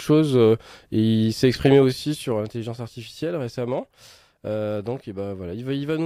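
Between 2.00 and 2.55 s the level drops by roughly 10 dB, and a rapid ticking rides on the sound for the whole of that drop. This is zipper noise. The gain is moving in 2 dB jumps, at roughly ten per second, with nothing smoothing the transitions, so each jump leaves a small click. The clicks track the level change itself, which sets this apart from a smooth fader move.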